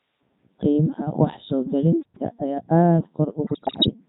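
Robotic, buzzy speech runs through the whole clip, the sound of the Codec 2 vocoder at 3.2 kbit/s. The decoder rebuilds each frame from pitch, voicing, energy and a spectral envelope using sine waves, so the original waveform is gone and the damage is heavy. From 3.44 to 3.93 s the synthetic voice lurches in pitch, loudness and tone colour, breaking into warbles and garbled bleeps. These are bit errors on digital voice radio, with roughly one bit in fourteen flipped. Each corrupted bit skews a whole frame's parameters.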